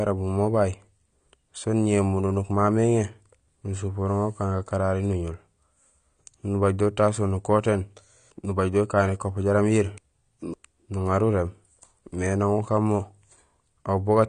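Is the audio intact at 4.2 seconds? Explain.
No. At 4.2 seconds the speech carries the AAC compression damage that runs through the whole clip. Nothing sounds above 10 kHz, and the remaining spectrum is coarsely quantised, so the audio is dull and smeared, with a warbling, fizzy edge on sibilants that is likely the work of AAC-LC at a low bitrate, fitting roughly 32 kbps. A simple low-pass filter would only dull the sound, without that swirling texture.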